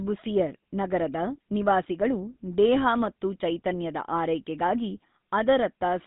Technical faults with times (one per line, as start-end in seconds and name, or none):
0.00-6.06 GSM full-rate codec